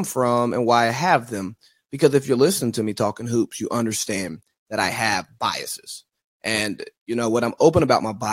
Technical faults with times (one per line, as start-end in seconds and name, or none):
none